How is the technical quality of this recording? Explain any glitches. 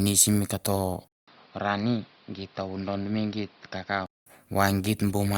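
The recording has one clear fault. From 1.08 to 4.26 s, after a 200 ms gap, the speech turns dull, about 5 dB quieter, cut above 5.6 kHz, with new noise about 30 dB down. The input likely switched to a poorer device.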